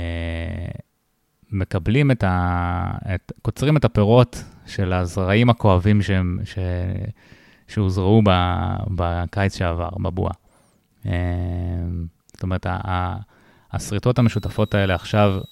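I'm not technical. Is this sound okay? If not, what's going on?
No. A switching supply whistle comes in at 14.16 s and lasts to the end at 15.51 s: a faint, high whine near 4 kHz, wandering between about 3.8 and 4.0 kHz. A switching power supply has slipped into an audible range and leaked into the recording.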